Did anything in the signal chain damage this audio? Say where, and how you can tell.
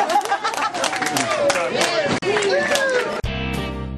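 Yes, at the codec stage. From 2.18 to 2.24 s a short blip of about 50 ms breaks into the sound. This points to damaged data in the compressed stream: corrupted bytes made the decoder misread those frames and lose sync until it found a valid frame header again.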